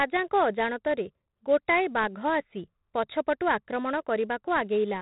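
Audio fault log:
Throughout: 4-bit ADPCM compression. Each speech sample is coded as a coarse 4-bit step from a predicted value, so quantisation noise rides on the signal as a gritty hiss that grows on loud passages. Sharp onsets distort because the adaptive step cannot grow fast enough. The damage is heavy and consistent with a 32 kbps stream. Nothing is present above 3.9 kHz, which points to an 8 kHz sample rate and gives the dull, narrow sound.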